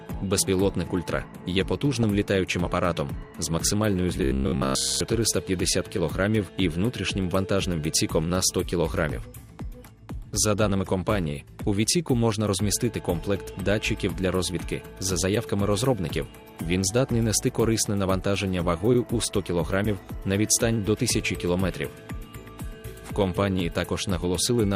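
From start to finish the audio has the dull, gurgling grain of MP2 compression, likely an 80 kbps stream. Upper sub-bands are starved of bits and switch in and out, and what remains is coarsely quantised. This damage is steady across the whole clip, unlike the brief bursts that follow.

From 1.93 to 2.03 s comes DAB burbling: a short spray of noise blips. Bit errors, at a rate of a small fraction of a percent, got past error correction and put short blips of noise into individual sub-bands, with about ten frames hit. It is random and momentary, with no pitch of its own.

From 4.18 to 5.01 s the sound becomes a rigid metallic buzz at 66.8 Hz, robotic sound from repeated short buffers. A roughly 15 ms chunk is likely being replayed in place of late audio for most of that stretch. What separates it from burbling is that fixed, periodic pitch.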